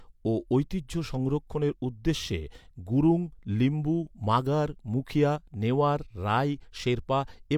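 No technical faults are audible.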